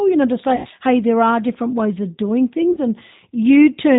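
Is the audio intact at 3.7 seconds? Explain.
No. At 3.7 s the speech carries G.729 codec damage, as it does throughout the clip. It is rebuilt from a vocal tract filter, pitch predictor and sparse pulses, which fits an 8 kbit/s stream. It sounds rough and synthetic, and a spectrogram shows nothing above 4 kHz.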